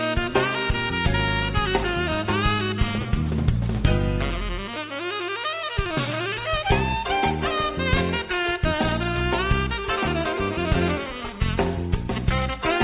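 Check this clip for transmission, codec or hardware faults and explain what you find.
Nothing in the clip points to a transmission, codec or hardware fault, so there is nothing to report.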